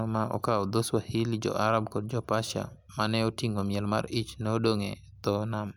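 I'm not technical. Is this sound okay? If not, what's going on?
Yes, this recording sounds fine, and there's nothing wrong here that you'd need to worry about.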